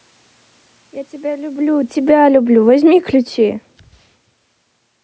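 Speech that starts loud and then sinks about 10 dB, together with its room background, from 1.46 to 3.72 s: automatic gain falling as the control pulls its gain down.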